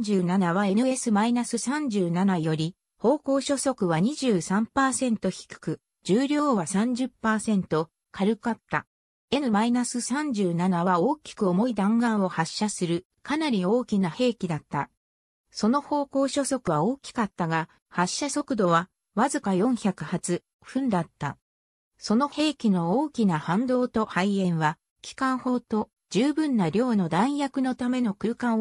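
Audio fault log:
16.64–16.68 s, damaged data in a compressed stream: a 34 ms glitch as the decoder misreads corrupt frames and hunts for the next header.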